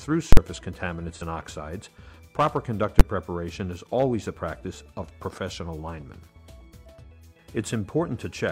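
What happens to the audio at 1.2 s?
An AAC frame is lost between 1.15 and 1.22 s, a 43 ms gap that fits one missing frame, and the decoder conceals it by rebuilding the sound from the last good spectrum. This AAC frame loss with concealment comes across as a brief smeared, noisy, phasey patch.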